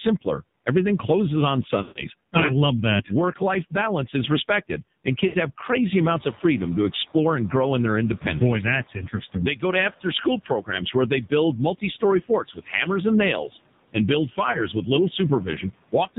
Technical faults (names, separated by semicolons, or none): AMR narrowband mobile codec; lost AMR speech frames; noise suppressor catching up; speech cut by the noise suppressor